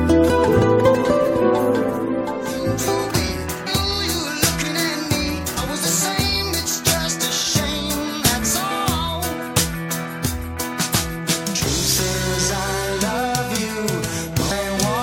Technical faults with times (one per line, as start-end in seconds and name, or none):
0.48 damaged data in a compressed stream
3.66 damaged data in a compressed stream
5.56 damaged data in a compressed stream